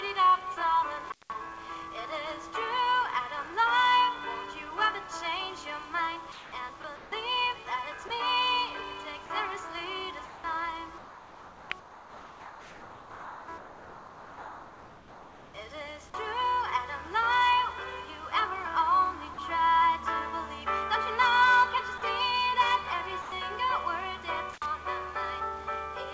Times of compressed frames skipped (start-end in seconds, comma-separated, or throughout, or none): none